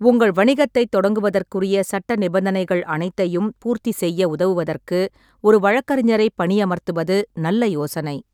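Listening to the speech recording, nothing stood out as a technical problem at any point.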